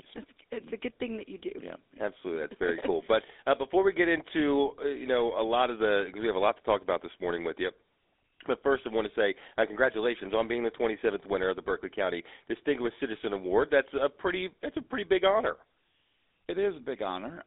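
From start to finish the speech sounds buzzy and gravelly, boxed into a narrow band of roughly 300 Hz to 3.7 kHz with nothing above 3.8 kHz. This is GSM full-rate codec damage: the vocal tract is modelled and re-excited by coarse, regularly spaced pulses, which fits a 13 kbps mobile link.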